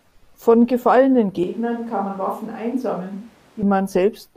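At 1.43 s the speech suddenly goes roomy and hollow, loses bass and drops about 5 dB, with room noise around 30 dB below it. That's a switch to a distant microphone, likely because the close mic dropped out, until 3.63 s.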